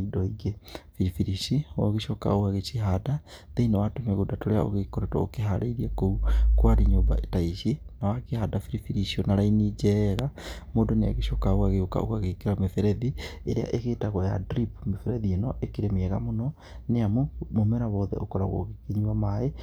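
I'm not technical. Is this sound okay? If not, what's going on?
No, there's one problem. At about 10.19 to 10.21 s, right after "icio na raini", there's a single loud pop, a sharp click much louder than the speech around it. It's over in a fraction of a second, and the talking carries on underneath as if nothing happened. That kind of sudden jolt likely comes from an electrical spike, such as a cable being bumped, a switch flicking, or a static discharge.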